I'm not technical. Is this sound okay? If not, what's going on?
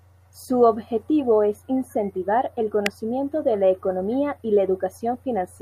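No. There's an electrical switching spike at 2.86 s: a sharp snap over the speech. It's likely caused by a nearby switch, motor or static discharge making a brief spark that the audio cable picked up as a click.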